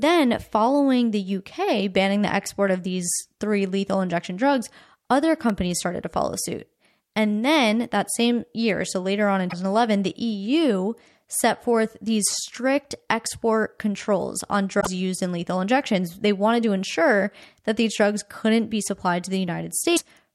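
At 5.50 s, between "lethal injection drugs other" and "started to follow suit", there is an electrical switching spike. A nearby switch or motor likely arced and the line picked it up, so a sharp snap or tight cluster of clicks sits on top of the speech.

Damaged data in a compressed stream follows at 9.47 to 9.53 s, just after "so later on in"; at 14.77 to 14.87 s, between "strict export controls on" and "used in lethal injections"; and at 19.93 to 20.01 s. Corrupted bytes in the stream made the decoder misread frames and lose sync. Each one is a brief chirp, squawk, click or short hole lasting 60 to 100 ms.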